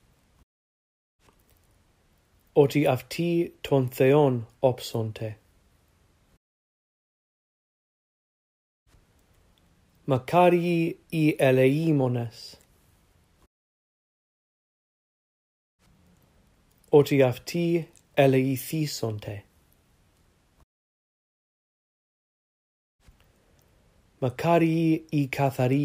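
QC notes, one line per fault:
No fault to note.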